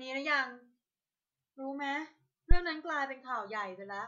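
At 2.51 s the speech is hit by a phantom power thump lasting until about 2.59 s. Switching the supply on or off on a live input sends a DC step through the coupling capacitors, producing a deep low-frequency thud peaking near about -10 dBFS, with a sharp fall that settles over roughly 18 ms. Unlike a plosive pop, it is unrelated to what the talker is saying. Unlike a handling bump, it is a single clean electrical step with no rustle or rattle around it.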